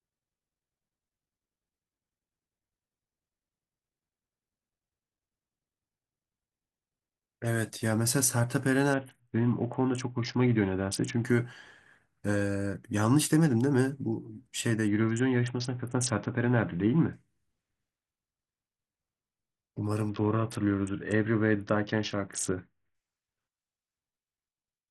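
Bluetooth SBC bit pool drops at 8.94–11.25 s, 14.88–17.13 s and 20.09–22.95 s dull the treble and add gritty quantisation noise to the speech. The sound fits a congested link forcing the bit pool from 28 down to 6, near 60 kbps, starving the upper sub-bands.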